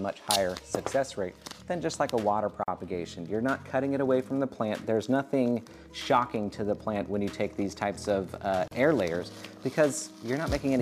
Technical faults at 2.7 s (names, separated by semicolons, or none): gap at a join of encoded pieces